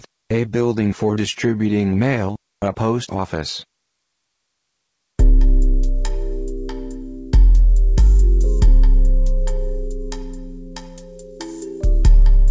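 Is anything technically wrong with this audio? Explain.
No, nothing stood out as technically wrong on listening.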